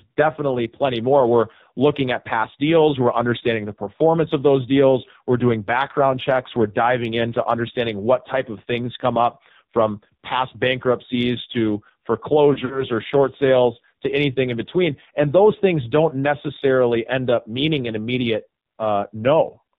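Throughout, the speech passes through the AMR narrowband mobile codec. Nothing above 4 kHz survives, and the heavy buzzy, synthetic texture points to a low mode, around 5.9 kbps. Unlike plain low-pass filtering, which only dulls the sound, this codec rebuilds the voice from a vocal-tract model with sparse pulses, which produces the buzz.

From 12.54 to 12.84 s, there are lost AMR speech frames. The decoder carries the last good settings forward with falling gain over about 80 ms of missing audio scattered across 160 ms, with no gap longer than 40 ms. The result is brief warbly dips rather than the hard silent dropouts of a broken connection.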